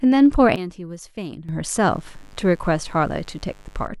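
At 0.56 s the speech and its background noise drop together by about 13 dB in a single step and stay down until 1.49 s, when they return just as abruptly. This sudden gain jump likely came from a gain setting applied without any ramp.

From 1.79 s to 3.88 s a steady, raspy buzz sits faintly beneath the speech, well below its level. This is mains buzz: sharp switching spikes at twice the 50 Hz mains frequency leak in, spreading harmonics up into the kilohertz range.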